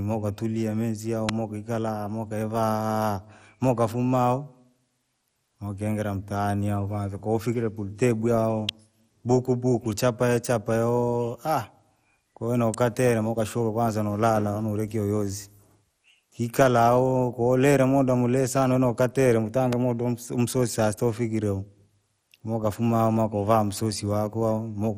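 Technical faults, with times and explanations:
Throughout: MP2 compression, most likely the cause of the dull, gurgling quality across the speech. The damage is plainly audible. This codec divides the spectrum into 32 equal sub-bands and shares a limited pool of bits among them, so the remaining bands are coarsely quantised and flicker in and out, giving the granular texture. The top end stops at 17.2 kHz, and the overall sound points to a rate around 64 kbps.
1.29 s, 8.69 s, 12.74 s and 19.73 s: electrical switching spike, heard as four sharp, isolated snaps sitting on top of the speech, each lasting only a few milliseconds. The likely source is a nearby switch, motor or static discharge arcing briefly and being picked up by the audio line. The arc injects a near-instant burst of energy unrelated to the program, so each one stands out as a crisp click.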